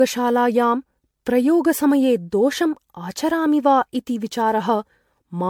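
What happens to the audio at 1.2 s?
At 1.2 s the speech carries generation loss, which runs through the whole clip rather than starting there. It sounds swirly, smeared and hollow, with blurred consonant attacks, most likely from around seven rounds of decoding and re-encoding with an MP3 codec at what sounds like 96 kbit/s, each pass adding fresh quantisation noise on a shifted frame grid. A spectrogram shows holes accumulating in the upper bands and no energy above 19.9 kHz.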